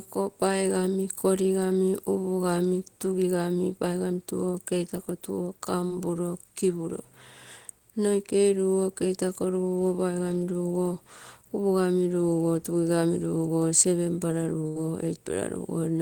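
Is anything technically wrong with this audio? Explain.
Yes. The speech has two packet-loss faults.

At 5.87 to 5.91 s there is a short concealed packet loss. About 20 ms of audio never arrived in time. The receiver extended the preceding sound for roughly 17 ms, then blended back. It sounds like a brief smear or wobble.

At 14.67 to 14.77 s there is a burst of packet loss. About 80 ms went missing in a row. The receiver held and faded the last sound for about 84 ms. A buzz or hiss replaces the speech, which then resumes further on.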